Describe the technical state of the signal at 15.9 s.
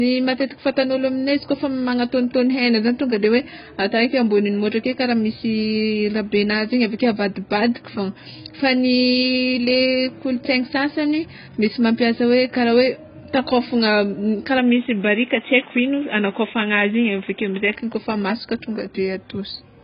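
At 15.9 s the signal is likely passing through heavy AAC compression, consistent with AAC-LC at around 16 kbps, leaving nothing above 5.1 kHz and a dull, smeared, warbling texture. The input also likely switched to a poorer device from 14.58 to 17.73 s, narrowing the band to below 3.8 kHz and adding new background noise about 30 dB under the speech, with no gap and no clear level change at either switch.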